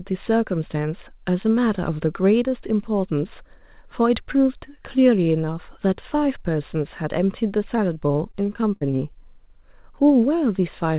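From 7.76 to 8.83 s there's repeated packet loss that turns the speech choppy and robotic: about seven short holes, the longest near 47 ms, each papered over by stretching the last bit of sound, all heard over a line topped out at 4 kHz, which fits G.711 mu-law.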